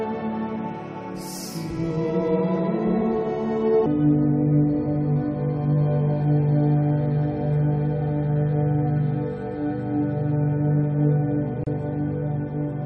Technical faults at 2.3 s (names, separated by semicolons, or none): none